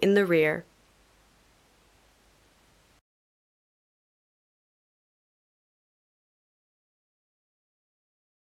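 No technical faults can be heard anywhere in this recording.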